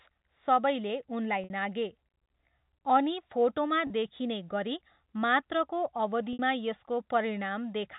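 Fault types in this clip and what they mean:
Packet loss with pitch repetition: bits of the stream went missing and the receiver covered each gap by looping the last pitch cycle. That gives a brief held, buzzy patch at 1.44 s (60 ms), 3.87 s (30 ms) and 6.33 s (60 ms) in the band-limited G.711 phone sound.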